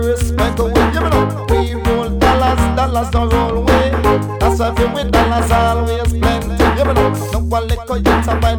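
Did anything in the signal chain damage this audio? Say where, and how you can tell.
No, nothing in the signal chain damaged this audio.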